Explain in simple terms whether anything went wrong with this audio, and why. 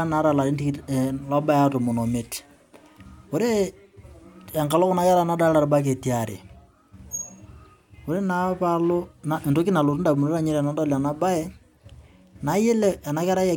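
Nothing went wrong; no problems can be heard anywhere.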